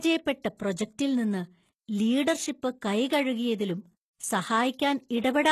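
From start to finish the speech carries plainly audible coding damage, likely from HE-AAC compression at a low bitrate, which fits something near 16 kbps. Nothing sounds above 12.3 kHz, but the region below that cut still sounds bright. That treble is synthetic, copied up from lower bands, so the s sounds come out gritty and metallic rather than simply dull. That brittle, rebuilt brightness is what separates it from an ordinary low-pass or band-limited encode.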